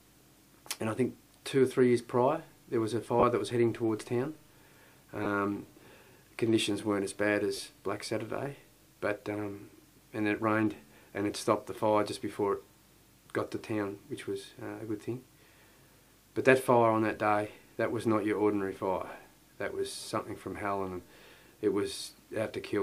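Lost LE Audio frames occur at 3.20–3.23 s, 5.24–5.26 s, 7.57–7.59 s and 15.56 s, gaps of 30, 20, 20 and 10 ms that fit whole 10 ms frames. The LC3 decoder fills each gap by repeating the last spectrum with randomised signs, so tonal content briefly turns into a short noisy smear.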